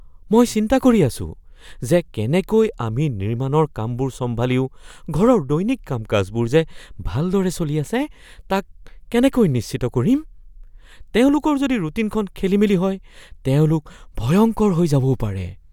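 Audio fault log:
No faults are heard anywhere in this speech recording. Nothing in the audio calls for an entry in this log.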